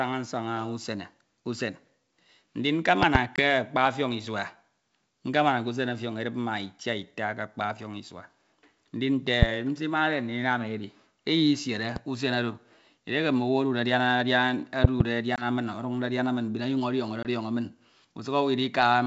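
Loud pops, a double at 3.03–3.18 s, singles at 9.42–9.45 s and 11.96–11.99 s (just before "usen oro edieke"), and another double at 14.84–15.03 s, stand about 20 dB above the speech. They are likely electrical pulses from a plug, switch or static, and appear as tall spikes and full-height vertical spectrogram lines.

Packet loss on the ADPCM call cuts 20 ms holes at 3.36–3.41, 15.36–15.45 and 17.23–17.27 s. These are flat gaps where the decoder's predictor then recovers, bringing briefly distorted speech.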